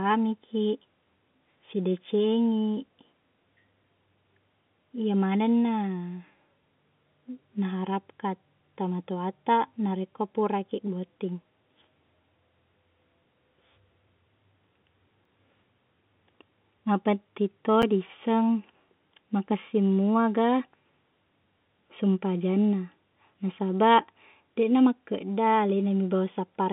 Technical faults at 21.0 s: none

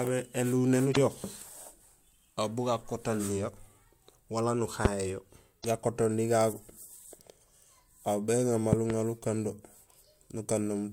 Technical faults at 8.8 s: loud pop

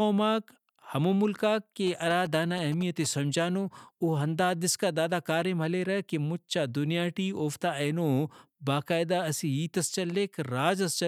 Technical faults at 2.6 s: GSM signalling bursts

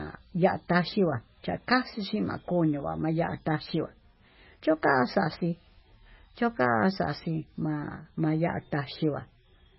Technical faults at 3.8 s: MP3 compression

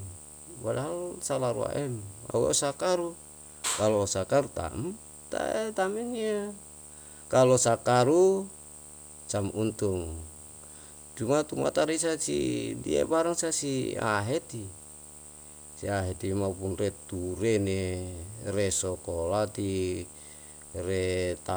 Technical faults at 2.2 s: video or display buzz

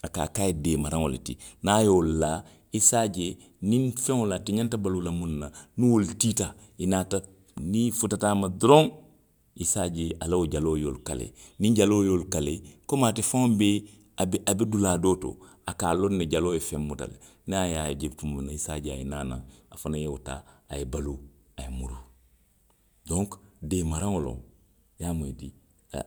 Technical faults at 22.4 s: none

